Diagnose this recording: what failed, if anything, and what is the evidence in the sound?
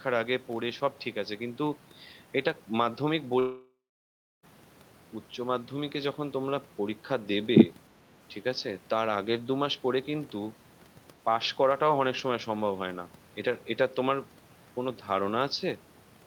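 Long network dropout, 3.39 to 4.45 s, at the network stage. The speech stops being real at 3.39 s. What follows is the last sound stretched into a fading buzz or hiss, and about 0.66 s of near-silence makes up the rest of the gap. Speech resumes at 4.45 s with roughly 1.04 s of material simply gone. This is likely a stall in packet delivery: the receiver's concealment extrapolated from the final good audio, ran out, and muted until the stream returned.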